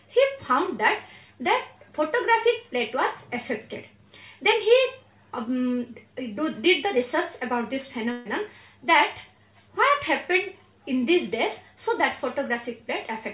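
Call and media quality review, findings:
Burst of packet loss, 8.12–8.27 s. The receiver's concealment extends the last sound for about 130 ms as a decaying buzz or hiss. Playback then resumes 140 ms further into the stream, with that stretch gone. Probable component: network path into the jitter buffer. The band ends at 4 kHz, consistent with a G.711 narrowband call leg.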